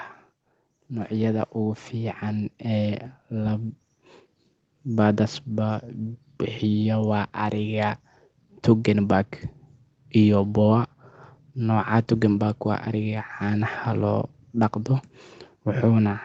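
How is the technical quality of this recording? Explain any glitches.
The one glitch is a gradual swell in level. From 0.89 to 3.82 s, voice and background grow louder together by about 8 dB. This is automatic gain rising: the gain control judged the input too quiet and turned it up step by step. The audio has passed through call microphone processing, with nothing above 8 kHz.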